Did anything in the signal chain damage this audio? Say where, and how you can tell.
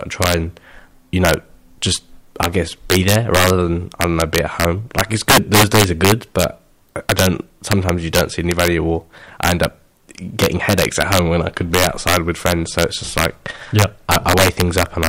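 Yes. Integer overflow damages the speech throughout, at a digital gain or sample-format conversion stage. The signal runs about 8 dB too hot, and the loudest peaks, under one percent of samples, wrap around to the opposite extreme instead of being limited. Each wrapped peak becomes a violent crack on loud syllables. Clipping would flatten peaks into a buzzy, softened distortion, while these full-range sign flips give sharp, isolated snaps that stand out harshly against the surrounding sound.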